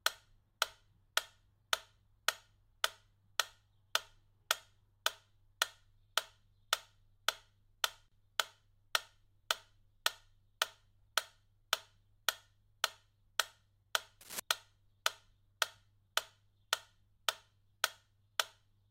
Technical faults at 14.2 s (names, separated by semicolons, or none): cable scratch noise